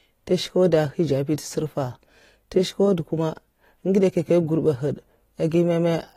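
AAC compression runs throughout the speech, likely from AAC-LC at a low bitrate, the plainly audible damage fitting roughly 32 kbps. Nothing sounds above 16.5 kHz, and coarse quantisation of the spectrum leaves the voice dull and smeared, with a warbling, fizzy edge on sibilants.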